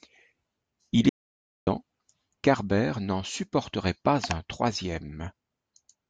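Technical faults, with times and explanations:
1.09 to 1.67 s, audio dropout to silence: the speech cuts off mid-flow and the next 0.58 s or so is dead digital silence, with no room tone or hiss at all, before the speech jumps back in. That total emptiness is the giveaway. The input was likely lost for a moment, through a loose connection, a failed link or a stray mute, while the recorder kept writing silence. Whatever was said in that gap is simply gone.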